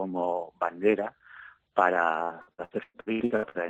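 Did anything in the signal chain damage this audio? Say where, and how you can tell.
Yes. From 2.23 to 3.58 s the sound turns choppy and robotic, with roughly half that stretch stretched over from the preceding audio and around ten holes, the longest 114 ms. That is repeated packet loss on the network, each missing chunk concealed by extending the last sound.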